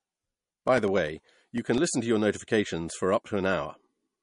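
Throughout the speech the sound has a watery, swirling quality with plainly audible smearing, and nothing is present above 10.6 kHz. This is likely MP3 compression at a low bitrate, around 43 kbps, where the encoder discards weak frequency lines frame by frame and cuts the treble.

From 0.08 s to 1.88 s there are regular ticks every 0.1 s, about twenty in all. These are periodic USB or driver dropouts: something blocked the audio path at a fixed interval, and roughly a millisecond of sound was replaced by silence each time.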